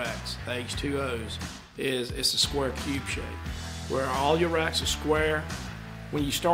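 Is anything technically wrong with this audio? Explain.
Yes. There are lost LE Audio frames at 1.32 s, a gap of about 10 ms that fits a single dropped Bluetooth LE Audio frame. With nothing arriving for that slot, the LC3 decoder fills it by repeating the last good spectrum with its phase signs randomised. Because the concealment keeps the spectral shape but scrambles its structure, the audio briefly turns into a short noisy smear before clean decoding resumes.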